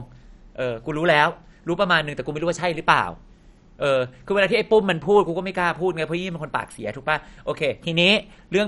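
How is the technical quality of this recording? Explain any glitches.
The technical quality is poor, with audible codec damage throughout the speech. From start to finish the sound is dull and gurgling, consistent with MP2 compression at a low rate, likely near 48 kbps. Layer II divides the spectrum into 32 sub-bands and rations bits among them. Here the top bands get nothing, so there is no content above about 11.3 kHz. The surviving bands are coarsely quantised and flicker, giving a granular, watery texture. A plain low-pass filter would sound dull but clean, and the gurgle here is what separates this from simple band-limiting.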